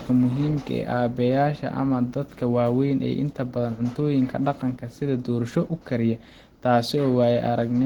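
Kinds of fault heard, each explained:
Opus compression: Throughout the speech there is a hoarse, grainy roughness with plainly audible codec damage, likely from Opus in its hybrid speech mode at a rate near 16 kbps. Bands are filled with noise rather than left empty, so the sound turns rough, not swirly as with MP3.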